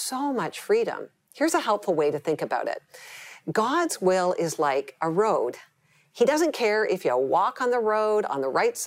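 From 5.34 to 6.34 s, the sound abruptly runs about 5.4% fast, its pitch rising by about 91 cents (nearly a semitone), then snaps back. This is likely a drift correction step, a one-off playback-rate jump to rebalance a buffer. On a spectrogram, all harmonic lines step upward together, then drop back.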